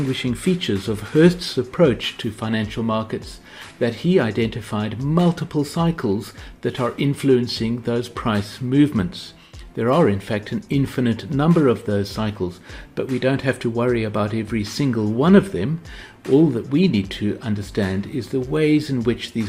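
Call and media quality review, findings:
Nothing to flag here: the audio comes across steady and intact, with no audible problems anywhere in the clip.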